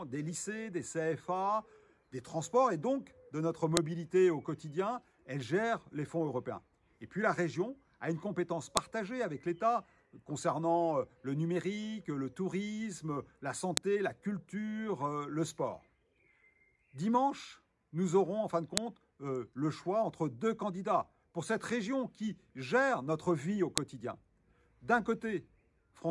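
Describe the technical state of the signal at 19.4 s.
At 19.4 s the signal is intact, with no dropout, distortion, glitch or other technical fault at that moment.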